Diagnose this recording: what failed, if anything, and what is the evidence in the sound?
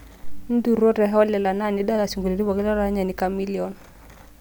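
Nothing in this speech recording stood out on listening as a failure at any stage of the chain.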